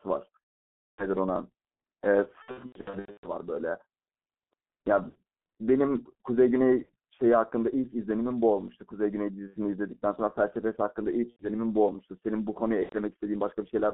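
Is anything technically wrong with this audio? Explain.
Yes, there are two faults.

G.723.1 codec, throughout: the whole clip has the heavy, low-rate character of this early internet-telephony codec, consistent with its 6.3 kbit/s mode. The band is limited to 200 Hz to 3.4 kHz and the coarse 30 ms frames smear the speech, so it sounds muffled and hoarse with blurred consonants.

VoIP packet loss concealed by the speech codec, at 0.74 to 1.07 s, 2.42 to 3.29 s, 5.09 to 5.18 s, 6.83 to 6.93 s, 9.47 to 9.58 s, 11.31 to 11.48 s and 12.83 to 12.96 s: the decoder fills the missing frames by extending its last pitch and filter while lowering the gain. The speech stretches into a fading buzzy or noisy tone. The 2.42 s stretch is a scattered series of short dropouts rather than one gap.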